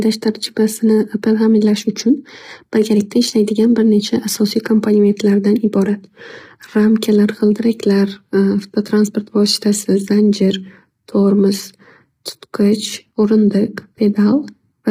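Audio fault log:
Throughout: low-delay AAC compression. The speech sounds rough and grainy, with noise filling the gaps between harmonics and a thin, synthetic top band. This is likely a low-delay AAC codec whose short frames blur pitch detail, and the heavy damage fits a bitrate near 24 kbps.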